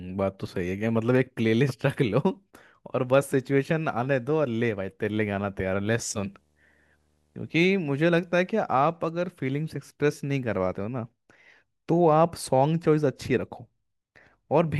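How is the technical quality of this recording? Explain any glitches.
The speech carries one glitch, a video or display buzz, from 6.17 to 8.58 s. A screen or video cable is leaking into the audio path. Its picture refresh runs at 75 Hz, and that field rate arrives as a steady buzz under the speech. A fizzy hash sits above the buzz. The interference is faint, far below the speech.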